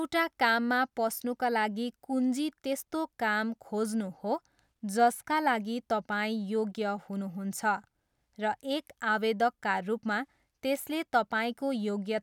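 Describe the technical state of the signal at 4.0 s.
At 4.0 s the speech signal is intact, with no audible technical fault at that moment.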